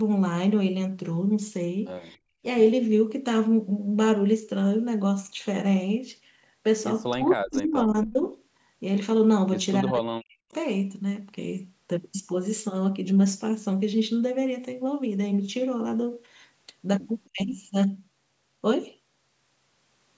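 At 2.17 to 2.42 s the room sound falls away, dropping by about 33 dB at its deepest. This is background gated by the echo canceller. It clamped the microphone while the loudspeaker played, then released it.

At 7.13 to 8.18 s, 9.81 to 10.48 s, and briefly at 17.28 to 17.41 s, the speech dips hard and breaks up, by around 40 dB at worst. The likely cause is speech suppressed in double talk. The canceller mistook the talker for echo.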